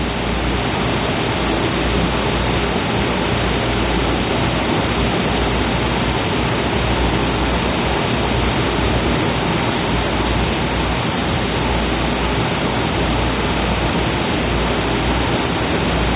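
Nothing goes wrong in this recording of everyday sounds; it just comes across as having gone over a call line, with nothing above 4 kHz, which fits a G.711 A-law link.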